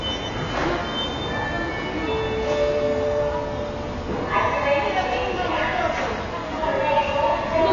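From start to finish the sound is dull, with nothing above about 7 kHz, and it has a smeared, warbly, fizzy texture. That's likely AAC compression, heavily squeezed. The damage fits a very low bitrate, somewhere around 12 kbps, forcing the low cut-off and coarse quantisation.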